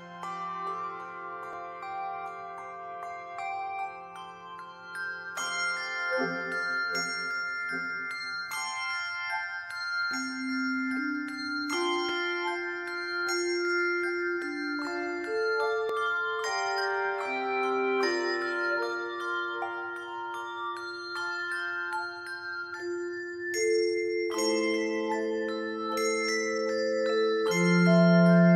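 You get three quick, small jumps in the sound, at 1.53 s, 12.09 s and 15.89 s. The first two skip ahead by a few milliseconds, and the one at 15.89 s by about twice that. There's no gap of silence: the audio on either side just butts together. That's most likely a dropped buffer (overrun), where the hardware overwrote a block before the software read it, so that slice simply vanished.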